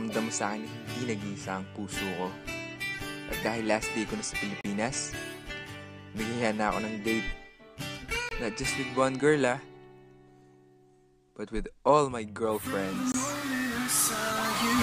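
Three blocks of digital silence cut into the sound: at 4.61 s for about 34 ms, and at 8.29 s and 13.12 s for about 23 ms each, which fits a 1024-sample output buffer not filled in time. Each gap cuts the sound out and back with no fade. On a waveform each appears as a near-flat line, and on a spectrogram as a blank vertical strip.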